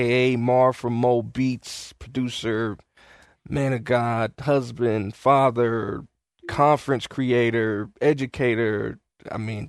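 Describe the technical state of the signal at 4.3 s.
At 4.3 s the speech signal is intact, with no audible fault at that moment.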